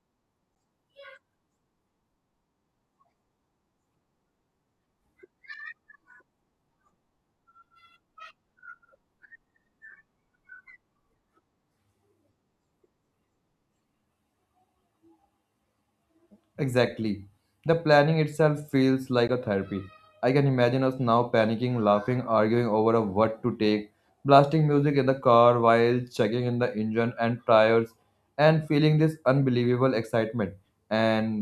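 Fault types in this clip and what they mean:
Block of digital silence: the speech drops to silence for about 8 ms at 0.55 s and for 16 ms at 19.28 s, then resumes with no fade. The first gap is too short to hear as a pause, so it lands as a tick; the second, just over that threshold, is a short hole. Unlike a faded dropout or concealed packet loss, nothing is smoothed or repeated. The waveform jumps straight to flat silence and back.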